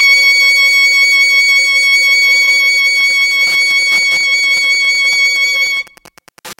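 Music, and it sounds hollow and phasey from start to finish. That's channel delay causing comb filtering: one channel is running around 5 ms behind the other, and when they're summed to mono the shared content cancels at evenly spaced frequencies. The first notch sits somewhere near 100 Hz, with more at regular steps above it. From 2.94 s to the end there's also Wi-Fi interference: a steady tick repeating every 102.4 ms, so roughly ten times a second, sitting around 25 dB below the music. That's a nearby Wi-Fi radio's beacon being picked up and rectified by the audio circuitry, which is why it comes through as a regular, mechanical pulse.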